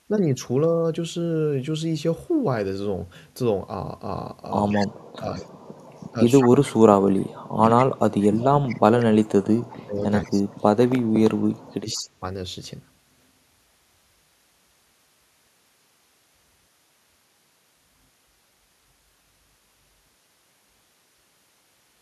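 An echo canceller that likely could not tell the near talker from loudspeaker echo while both sides spoke causes speech suppressed in double talk in this speech recording. The voice dips by up to about 30 dB for roughly half a second between 4.68 and 5.49 s, then by up to about 35 dB across roughly five seconds between 6.11 and 12.21 s. The same canceller likely let some loudspeaker pickup through, giving echo leak: a copy of the voice delayed by 183 ms surfaces in brief scraps at 4.70–4.77, 5.35–5.45, 6.41–6.48, 8.43–8.75, 10.24–10.30 and 11.92–12.01 s, from about 10 to 35 dB below the speech.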